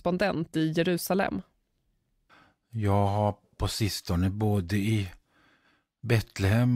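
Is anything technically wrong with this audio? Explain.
No, nothing here sounds technically wrong, so there's nothing to flag in this speech recording.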